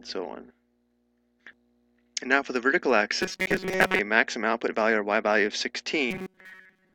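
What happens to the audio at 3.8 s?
New audio was likely arriving too seldom, so from 3.21 to 3.99 s the system kept repeating a buffer of about 5 ms in place of most of the real sound. This robotic sound from repeated short buffers is a rigid, metallic 188 Hz buzz that follows the original only roughly.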